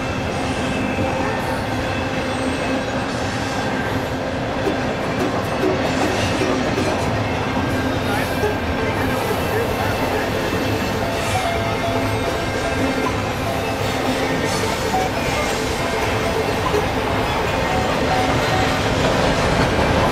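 No technical faults are audible.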